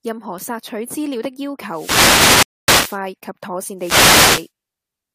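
Just after "資料的要", from 1.68 to 3.07 s, a wireless microphone noise hit disturbs the speech. The FM radio link fades as reflected signals cancel, and the receiver's noise swells into a hiss of static. A second hit follows "妥善" from 3.77 to 4.50 s.

Inside the first hit, from 2.43 to 2.68 s, a rebuffering stall cuts the audio to silence. The player ran out of downloaded data and waited for more. Playback then resumes exactly where it stopped, adding about 0.25 s without losing anything.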